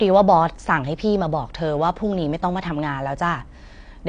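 Throughout the speech, a low-bitrate encode has likely thrown away detail. It is AAC compression, and the damage fits AAC-LC at around 32 kbps: nothing survives above 9.7 kHz, so the sound is dull and smeared, with fizzy, warbling sibilants.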